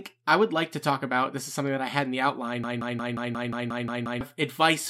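A speech clip with a broken-record loop starting at 2.64 s, right after "I had in the", and running to 4.21 s. A fragment of about 0.18 s repeats exactly nine times back to back, so the speech stalls into a stutter and the words that should follow are lost. The likely cause is a player or stream stall that kept replaying its last held buffer. On a spectrogram this shows as identical blocks tiling at a 0.18 s period, and the waveform repeats the same shape.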